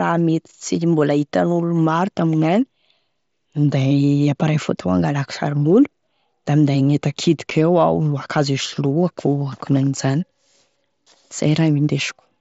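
At 7.50 s, concealed Bluetooth headset packet loss: a voice packet from the headset never arrived, and the phone bridged the gap by repeating the closest-matching piece of the preceding waveform. The gap, about 7.5 ms, points to one lost frame, so the repair is nearly inaudible within the speech.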